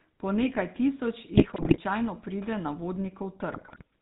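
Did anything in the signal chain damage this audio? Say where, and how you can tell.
Yes. At the codec stage, the GSM full-rate codec colours the whole clip: gravelly, buzzy roughness and nothing above 4 kHz. That roughness, not mere dullness, marks coarse pulse-excited coding, which fits 13 kbps.

On the radio link, GSM bit errors from 1.36 to 1.79 s and 3.52 to 3.82 s cause squawks and gargling. Corrupted filter, pitch and gain values distort frames rather than leaving the silent gaps of packet loss.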